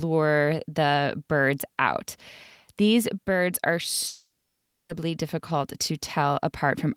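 At 4.07 s the speech turns into a fading buzz, then about 0.6 s of near silence until 4.91 s, likely a long network dropout losing 0.82 s.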